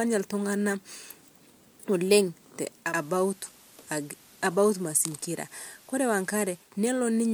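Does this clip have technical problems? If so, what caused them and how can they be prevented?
Yes. Digital radio blending to analogue occurs from 2.78 s to 6.76 s. The receiver lost its digital signal and cross-faded over about 217 ms to the station's FM broadcast, bringing in hiss roughly 30 dB below the speech and a level drop of about 2 dB, before blending back to digital. A stronger antenna or better reception, or recording from a digital-only source such as the station's stream, would prevent it.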